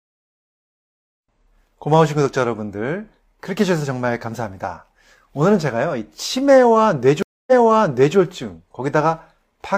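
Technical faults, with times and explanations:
7.23–8.17 s, stream reconnect: the speech cuts out for about 0.25 s as the connection drops, and when a fresh decoder picks the stream back up it resumes roughly 0.7 s earlier, so a short stretch of speech repeats. The waveform shows a flat gap followed by audio that fades or swells in. On a spectrogram there is a blank vertical band, then the preceding patterns reappear.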